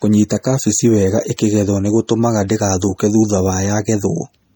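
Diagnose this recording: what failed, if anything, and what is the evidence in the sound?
Codec stage: the speech sounds watery and swirly throughout, likely from MP3 compression at a low bitrate near 48 kbps. A spectrogram would show flickering holes in the upper bands.

Codec stage again: pre-echo at 1.37 s, just after "kabeci wega", and at 2.07 s. Block-spread quantisation noise adds a short hiss 13 to 19 ms before each attack, visible as a smear ahead of the onset.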